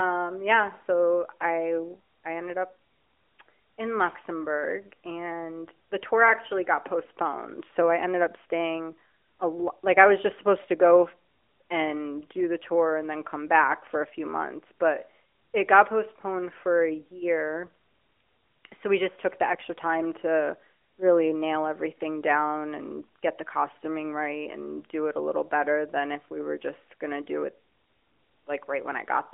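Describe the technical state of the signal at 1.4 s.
At 1.4 s the signal is intact, with only the narrowband telephone character of the AMR mobile codec path audible there, its top end stopping at about 3.7 kHz.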